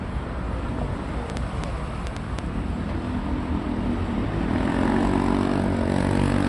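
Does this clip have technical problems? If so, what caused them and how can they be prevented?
Yes. There are two problems.

The whole clip carries MP3 compression damage, and it is plainly audible. Nothing is heard above 11.3 kHz, so the top end sounds dull. The fine detail swirls and sounds watery. Weak frequency components drop in and out between frames. Sharp onsets lose their edge and smear. The amount of damage points to a low bitrate, near 46 kbps. The likely cause is an encoder short of bits that cut the treble and discarded quiet detail. To prevent it, keep an uncompressed master and encode at a higher bitrate.

A train of clicks runs from 1.3 to 2.40 s. It has around seven ticks, about 4.6 per second. The spacing is uneven. The clicks stand out clearly, at about 15 dB above the surrounding sound. They share much the same shape, so one source keeps repeating. The likely cause is electrical interference from nearby equipment, or a faulty connection or power supply. 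To prevent it, move or shield nearby gear and check the connections and power supply.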